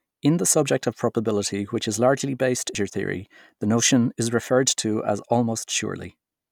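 At 2.75 s, just after "which is largely based", a tick and a very brief mute break the speech, and playback resumes at "theory the notion is". This is a CD skip, where the laser jumped to another turn of the disc's spiral.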